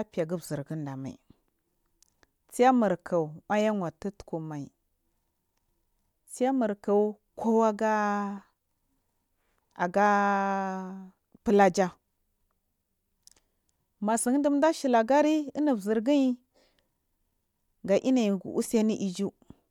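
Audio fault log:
Nothing stood out on listening to the speech in this clip.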